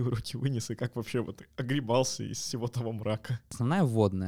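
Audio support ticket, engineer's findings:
No faults found on listening; speech signal level, continuity and timing all check out with nothing to trace to any component in the chain.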